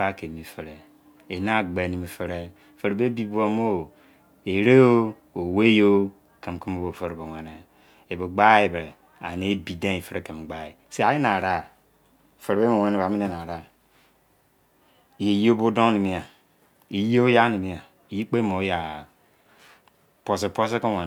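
No technical faults can be heard anywhere in this speech recording.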